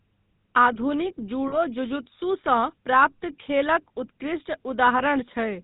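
Speech run through the GSM full-rate codec, which fits a 13 kbps mobile call path. It has a plainly audible buzzy, gravelly roughness from the pulse-driven vocal-tract model. A spectrogram shows nothing above 4 kHz and a coarse, smeared harmonic structure. Lost GSM frames occur at 1.48–1.55 s and 4.98–5.01 s, covering about 40 ms and 20 ms of sound. In each gap the decoder holds the last good frame, so the sound freezes into a brief metallic ring. On a spectrogram these appear as short, flat, repeated slices. The waveform shows a short stretch where the speech movement stops.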